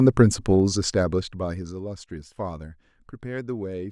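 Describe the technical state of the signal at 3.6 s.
At 3.6 s the speech signal is intact, with no audible fault at that moment.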